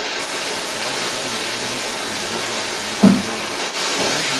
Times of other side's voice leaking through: 0.00-4.39

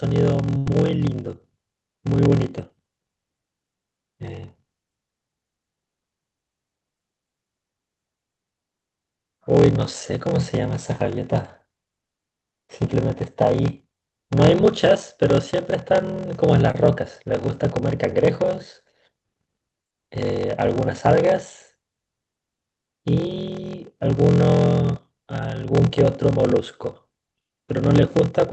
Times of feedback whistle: none

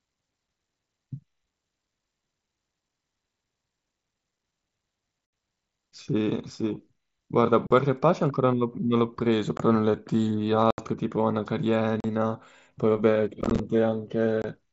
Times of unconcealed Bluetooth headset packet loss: 5.26-5.33, 7.67-7.71, 9.57-9.60, 10.71-10.78, 12.00-12.04, 13.41-13.60, 14.42-14.44

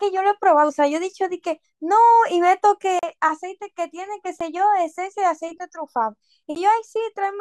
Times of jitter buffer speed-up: none

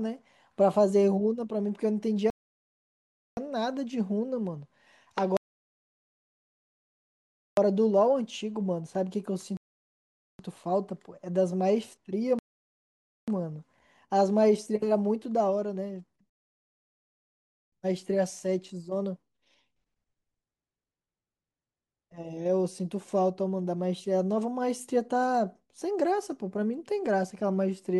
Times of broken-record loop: none

